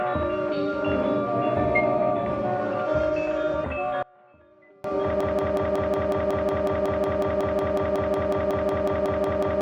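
A music recording with two distinct faults. From 4.03 to 4.84 s one channel inverted, likely a polarity flip on one side, makes the material common to both channels cancel when summed to mono. The level falls by about 29 dB, leaving only a faint residue of the difference signal. On a mono waveform this shows as a sudden collapse to a narrow sliver. On a spectrogram it is a dark gap, with the low end almost entirely gone. Then at 5.21 s a broken-record loop begins and runs to the end. A 183.5 ms fragment repeats exactly, back to back, roughly two dozen times, while the music that should have followed is lost. The likely cause is a player or stream stall that kept resending its last buffered piece. The waveform shows identical blocks tiled at a fixed spacing, and the spectrogram shows the same pattern stamped repeatedly.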